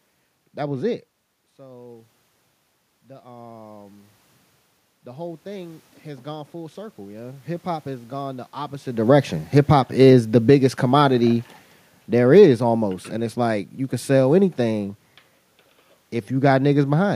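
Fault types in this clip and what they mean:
Automatic gain rising: From 3.22 to 4.15 s, and again from 5.04 to 8.83 s, the speech and the room noise behind it swell up together rather than the voice alone getting louder. After the input level fell by about 18 dB, the automatic gain control judged the signal too quiet and raised its gain gradually, by about 4 dB in the first rise and about 8 dB over the longer second one.
Automatic gain falling: Between 8.95 and 11.48 s the speech starts loud and then sinks, and the room noise sinks with it. That shared drop marks a change made by the system, unlike the talker's own movement near 9 s, which alters only the voice. The automatic gain control judged the input too loud, or its background noise too strong, and pulled its gain back gradually, by about 4 dB over roughly two and a half seconds.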